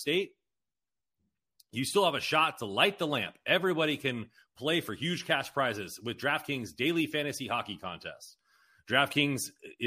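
Speech with computer activity noise from 2.14 to 4.14 s, between "you still have" and "play for huge cash": a faint buzz pulsing around 150 Hz, riding the machine's shared ground rather than the voice.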